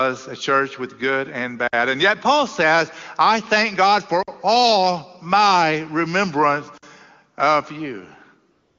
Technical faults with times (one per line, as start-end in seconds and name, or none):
1.68-1.73 gap between chunks
4.23-4.28 gap between chunks
6.78-6.83 gap between chunks
8.51-8.79 AMR comfort noise